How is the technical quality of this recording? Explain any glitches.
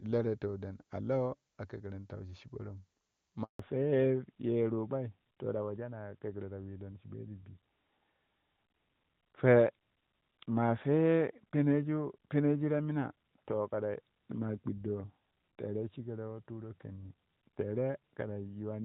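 The recording has two linked faults. A brief dropout is followed by a permanent loss of bandwidth, so the call begins in HD Voice and ends sounding like an ordinary phone line.

Handover gap, 3.43 to 3.59 s: the call was passed from one network to another, and for about 160 ms no speech frames reached the decoder. The speech fades out within a few tens of milliseconds and then goes completely silent until the new link starts delivering audio. Whatever was said in that window is lost. On a waveform this is a flat stretch of near-zero amplitude. On a spectrogram it is a clean vertical blank band across all frequencies.

Fallback to narrowband, 3.59 s to the end: after the switch, the call dropped from the wideband AMR-WB codec to narrowband AMR-NB, which carries nothing above 4 kHz. The first 3.4 s are clear and crisp, and the sound then turns duller, boxier and rougher, losing the sibilance and airiness of consonants. 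The quality before the handover points to AMR-WB at around 23.85 kbit/s, and the later sound fits AMR-NB at 12.2 kbit/s. On a spectrogram, energy reaches up to about 7 kHz before 3.59 s, and after that point there is a hard horizontal ceiling at 4 kHz with empty space above it.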